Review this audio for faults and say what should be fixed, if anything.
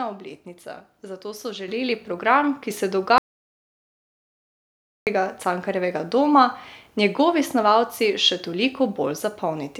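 At 1.68 s, between "obletnica zato so" and "program ki se", the microphone volume is stepped up by about 7 dB in a single jump. Speech and background noise rise together, so the waveform envelope and the spectrogram's noise floor both brighten at once at that instant. To prevent it, turn off automatic microphone gain adjustment in the call software and set a fixed input level before recording.

From 3.18 s to 5.07 s, right after "program ki se", there is an audio dropout to silence lasting about 1.9 s, likely from lost input with the encoder writing silence. The waveform shows a flat line and the spectrogram a fully black gap with no room tone. To prevent it, secure the microphone connection and monitor the input during recording so any interruption is caught and the passage re-recorded.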